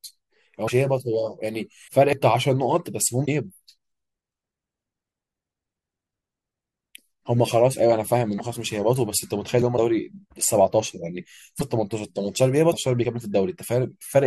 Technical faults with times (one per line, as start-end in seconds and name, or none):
0.67-0.70 broken MP3 bit reservoir
1.87-1.90 broken MP3 bit reservoir
2.13 audio missing between chunks
3.25-3.28 broken MP3 bit reservoir
4.79 broken MP3 bit reservoir
8.37-8.40 broken MP3 bit reservoir
9.76-9.79 broken MP3 bit reservoir
11.59-11.62 broken MP3 bit reservoir
12.71-12.74 broken MP3 bit reservoir